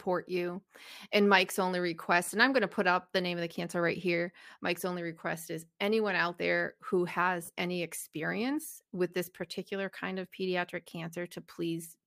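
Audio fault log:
2.24–2.30 s and 7.45–7.50 s, Bluetooth stutter: twice the wireless link dropped or delayed audio packets, so the receiver kept replaying its last buffered slice until fresh data arrived. Each time the speech catches in a brief buzzing repeat, about 50 ms long, just before "and I'm going to" and between "anyone out there who" and "any experience with this". When playback resumes, about 30 ms of speech is skipped, which points to roughly two lost packets.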